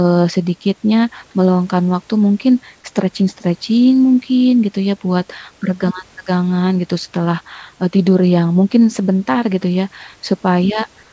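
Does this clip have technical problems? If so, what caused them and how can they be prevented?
Yes. At the very end, from 11.03 to 11.12 s, the sender's voice activity detection likely judged the signal to be silence and switched to discontinuous transmission. The receiver then filled the gap with generated noise. The result is comfort noise in place of the background: for about 0.1 s the real room noise, which sits about 34 dB below the loud parts, becomes a flat, featureless hiss about 4 dB quieter. To prevent it, turn off discontinuous transmission or make the voice detector keep sending through trailing background sound.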